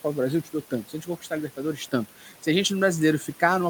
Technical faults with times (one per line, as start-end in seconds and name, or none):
0.00-3.70 noise suppressor artifacts
0.71-1.32 speech cut by the noise suppressor
2.09-2.45 speech cut by the noise suppressor